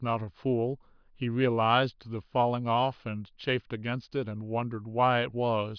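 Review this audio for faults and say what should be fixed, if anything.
Nothing needs fixing, as the recording holds together as a continuous, intact signal with no technical faults to address.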